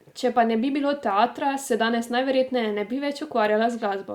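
No faults detected in the speech recording: no dropouts, glitches or distortion at any point.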